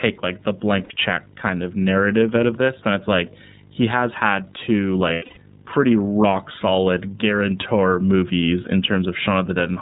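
Throughout, a screen or video cable couples into the audio path, producing video or display buzz: a 50 Hz field-rate buzz with hash above it, plus a 15.6 kHz line tone, around 20 dB below the speech. The speech also passes through the iLBC codec with 30 ms frames, which fits its 13.33 kbps mode. Nothing above 4 kHz survives, and the voice sounds plainly rough and synthetic. At 0.84 to 0.91 s, lost iLBC frames leave a 60 ms gap, which fits two frames. The decoder repeats the last pitch cycle, so it sounds like a brief held, buzzy vowel before the voice snaps back. From 5.12 to 5.40 s, about 210 ms of audio goes missing, scattered across 240 ms, with the longest run near a tenth of a second. The result is a choppy stretch of breathy, held fragments.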